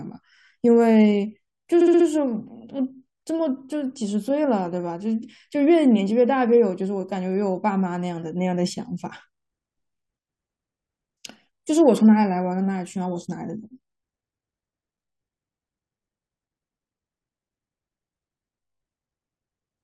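Repeated frames at 1.8 to 2.06 s: a 64 ms chunk of speech replays four more times, stuttering and adding 256 ms.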